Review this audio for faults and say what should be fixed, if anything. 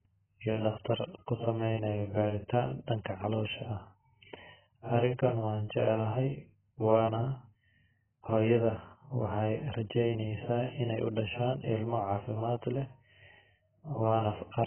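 AAC compression, throughout the clip: the speech is dull and smeared, with nothing above 3.1 kHz and a heavy warbling, fizzy texture on sustained vowels and sibilants. The likely cause is AAC-LC encoding at a very low bitrate, which fits roughly 9 kbps. With so few bits per frame, the encoder lowers its cut-off to 3.1 kHz and quantises the remaining frequency lines so coarsely that bands drop out or are filled with substitute noise. To prevent this, encode at a substantially higher AAC bitrate, or keep an uncompressed master and re-export from it.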